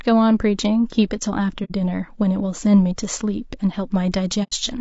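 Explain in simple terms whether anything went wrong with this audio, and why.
The speech sounds rough and grainy throughout, with a dull, artificial top end. This is likely low-delay AAC compression, squeezed too hard for a call.

At 1.64 to 1.71 s and 4.43 to 4.53 s, the sound briefly fades to silence and back. This is AAC frame loss with muting: missing chunks are replaced with quiet.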